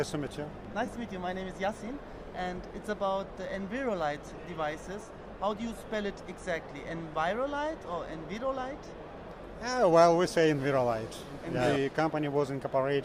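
Around 0.86 to 0.88 s there's a quick dropout of lost LE Audio frames, and the same thing happens again at 5.79 to 5.81 s. Each gap is about 20 ms, which points to two 10 ms LC3 frames going missing over the Bluetooth link. The decoder covers the hole by replaying the last spectrum with randomised phase signs, so instead of a click you hear a brief noisy smear. The lossy codec coding underneath is light.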